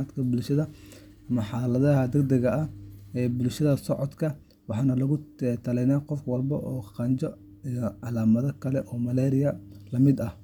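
Listening to the speech recording, nothing stood out as a technical problem.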